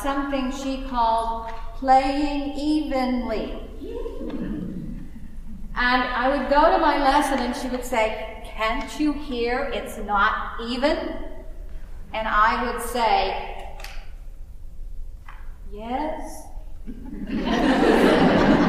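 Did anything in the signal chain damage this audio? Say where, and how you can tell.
No, nothing in the signal chain damaged this audio, and no stage shows any sign of harm.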